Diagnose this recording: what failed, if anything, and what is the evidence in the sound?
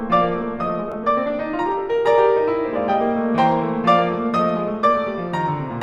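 A Bluetooth stutter at the wireless link: one audio packet failed to arrive in time, so the receiver replayed the slice it already held instead of waiting. In the music this is heard from 0.92 to 0.94 s as a brief doubled fragment, about 15 ms of material repeated once, giving a tiny hiccup rather than a sustained buzz. The music then resumes slightly further on, as if it had kept playing, which points to a single dropped packet.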